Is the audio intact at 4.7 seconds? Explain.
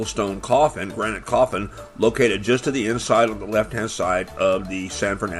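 Yes, the audio is intact at 4.7 seconds, with no fault audible at that moment.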